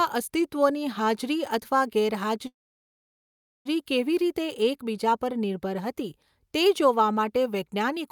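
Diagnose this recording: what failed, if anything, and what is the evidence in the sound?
Call audio freeze, 2.47 to 3.67 s: speech halts into 1.2 s of near-silence, then resumes where it left off. Network delay likely emptied the jitter buffer.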